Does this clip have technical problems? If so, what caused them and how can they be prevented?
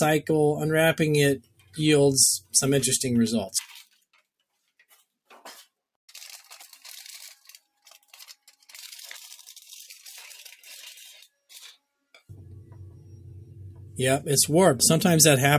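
Yes. A noise suppressor applied to music or sounds runs through the whole clip. A speech-oriented suppressor stays active and treats sustained material, ambience and decays as noise, pulling them down by a few decibels. Onsets pass while held sound sinks, so the level pumps and thins from moment to moment. To prevent it, disable or bypass speech noise suppression whenever the source is not speech.

Sound cut by the noise suppressor occurs from 1.38 to 1.79 s and again from 2.39 to 2.54 s. In these stretches the suppressor misjudged the material as noise and cut it much harder than elsewhere, by about 18 dB at the deepest point in the first and about 17 dB in the second. Steady or decaying sound drops away in each gap, and its tail is cut short. To prevent this, turn off the suppressor or set a much gentler reduction limit for non-speech audio.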